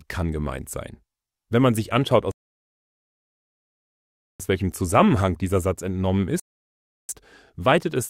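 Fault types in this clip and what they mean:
Rebuffering stall: the player ran dry of downloaded audio and had to wait for more before carrying on. You hear it twice, as a clean drop to silence from 2.31 to 4.40 s, roughly 2.1 s of dead air, and again from 6.40 to 7.09 s for about 0.69 s. Each time the sound picks up exactly where it left off, so nothing is skipped. The clip just gets stretched by those pauses.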